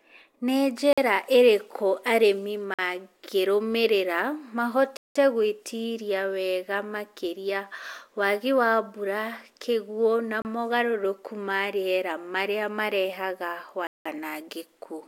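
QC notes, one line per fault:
0.93 s and 2.74 s: block of digital silence, 46 ms each. The speech drops to silence with no fade and resumes just as abruptly, so each gap is a short hole. The length fits a 2048-sample buffer that was not filled in time.
4.97 to 5.16 s and 13.87 to 14.06 s: block of digital silence, 186 ms each. These are heard as dropouts with hard edges. The length fits an 8192-sample block left unfilled.
10.42 s: block of digital silence, 30 ms. A brief hole, heard as a tick-like break in the speech.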